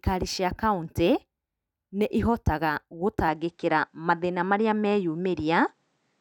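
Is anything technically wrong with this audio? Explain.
Yes. From 3.28 s to the end, the sound turns duller, which is likely an input switched to a poorer device: a spectrogram shows everything above 9.3 kHz cut off, with faint new noise floor about 45 dB down.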